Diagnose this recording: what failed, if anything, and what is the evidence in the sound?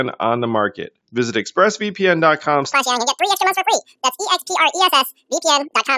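The playback stage failed with a wrong sample rate. From 2.73 s to the end, the speech runs twice as fast and a full octave higher, about 12 semitones. That fits 16 kHz material clocked out at 32 kHz without resampling, so speed and pitch rise together.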